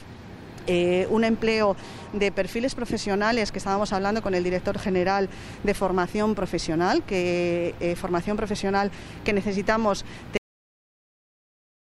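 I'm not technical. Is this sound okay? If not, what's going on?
No. There is a cut-off end at 10.37 s: the sound stops abruptly mid-way, with no natural fade, and the last 1.5 seconds are dead silence. The final stretch of audio was never saved or played, so the recording simply breaks off.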